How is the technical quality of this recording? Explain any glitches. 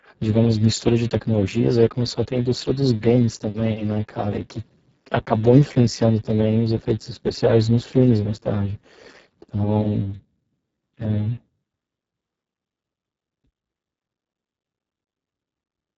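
The technical quality is poor. The speech is heavily coded throughout, and that one fault shapes the whole recording.

Speex codec, throughout: This CELP coder has too few bits to model the excitation, so the voice comes out hoarse, noisy and close to robotic, which fits a bitrate of roughly 6 kbps. Nothing sits above 7.7 kHz, and the upper band is a hissy, shaped fill rather than real detail. Unlike transform codecs, which warble or smear, this damage is a buzzy, rasping synthetic quality.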